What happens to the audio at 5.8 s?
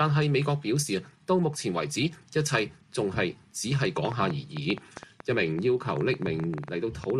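At 5.8 s the audio is inside a train of clicks running from 4.05 to 7.11 s. Sharp, similar pops arrive unevenly, about 7.2 per second, roughly twenty in all, peaking about 10 dB above the sound. Likely cause: interference or a faulty connection or power supply.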